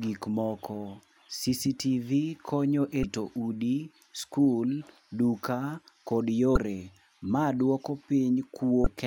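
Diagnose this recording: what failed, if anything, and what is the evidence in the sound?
The failure is at the codec stage: damaged data in a compressed stream. Stretches of the encoded bitstream arrived corrupted, so the decoder misread those frames, lost sync and had to hunt for the next valid frame header before resuming. In this speech clip that produces three brief glitches, at 3.01–3.04 s just before "udi skul duka kod", at 6.53–6.57 s right after "udi skul duka kod", and at 8.83–8.87 s, each about 34 ms long.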